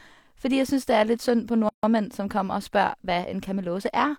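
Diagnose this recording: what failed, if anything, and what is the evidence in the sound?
Gap at a join of encoded pieces, codec stage: speech drops out from 1.69 to 1.83 s, a 145 ms blank band with smeared edges, left by untrimmed encoder delay and padding.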